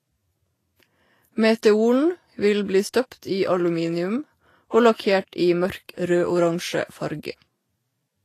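Throughout, the speech has grainy, hissy treble and blurred onsets, likely Vorbis compression at a rate fitting about 30 kbps. Unlike steady hiss, this noise tracks the signal.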